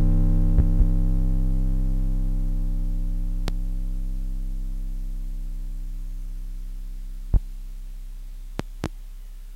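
A sudden voltage pulse, likely from a plug, switch or static discharge, lands on the signal as a loud pop well above the music, which plays on beneath it: double pops at 0.59–0.84 s and 8.60–8.88 s, single pops at 3.48–3.52 s and 7.34–7.38 s.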